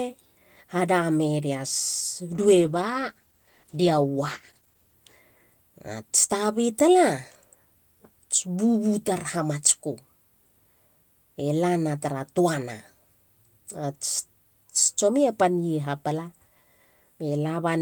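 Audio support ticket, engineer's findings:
Speech turns rough and watery, top end dulled, 2.31–5.01 s, worst for about 2.6 s. Call bitrate drop: bandwidth estimate fell and the encoder was starved of bits, fitting a fall from 32 to 14 kbps. Coarser coding, highs cut until recovery.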